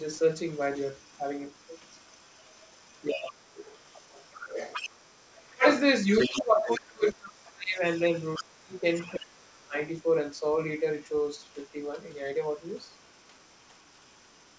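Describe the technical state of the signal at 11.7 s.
At 11.7 s the signal is intact, with no fault present, just the ordinary band limit of the call path, which leaves nothing above 8 kHz and fits a wideband G.722 link at 64 kbps.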